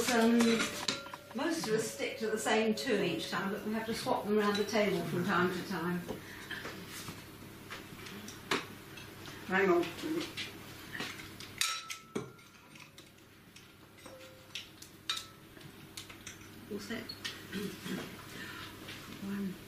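No audible technical faults anywhere in the recording.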